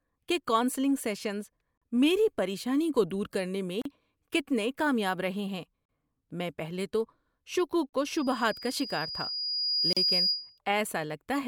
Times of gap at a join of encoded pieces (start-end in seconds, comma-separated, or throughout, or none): 1.77-1.82, 3.82-3.85, 5.85-5.89, 7.89-7.93, 9.93-9.97